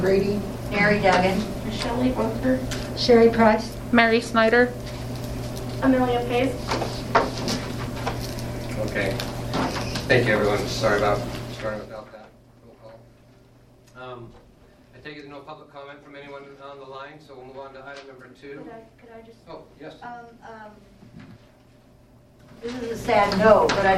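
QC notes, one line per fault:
11.35 to 12.20 s and 22.36 to 23.30 s, zipper noise: the level drops by about 20 dB, then later rises by about 20 dB, in unsmoothed 2 dB jumps at around 15 and then 10 per second. Each jump clicks, so a ticking zip rides on the sound.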